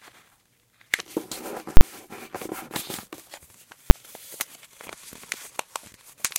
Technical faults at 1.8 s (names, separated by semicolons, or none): invalid numbers at full scale